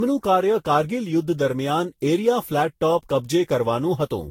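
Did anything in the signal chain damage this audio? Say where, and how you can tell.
Yes: at the codec stage, generation loss throughout this speech: swirly, hollow, smeared attacks, nothing above 16.7 kHz, likely from roughly seven successive lossy re-encodes around 64 kbit/s.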